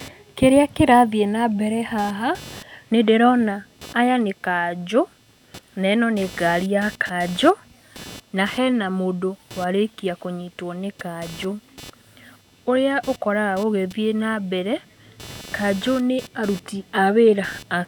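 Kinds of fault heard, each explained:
Computer activity noise: buzzing at around 300 Hz, roughly 25 dB below the speech throughout, from processor or peripheral load changes disturbing the audio circuit's shared ground.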